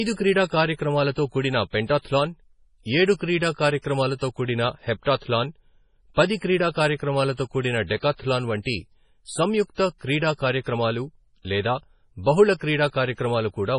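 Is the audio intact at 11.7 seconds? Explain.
No. At 11.7 s, as across the whole speech clip, the sound carries heavy damage that is likely MP3 compression at a very low bitrate, around 24 kbps. Short of bits, the encoder drops the treble and zeroes weak frequency lines that flicker between frames, giving a watery, swirly tone with chirpy s sounds and smeared attacks. A spectrogram shows a hard ceiling with nothing above 10.5 kHz and patchy, blocky holes below it.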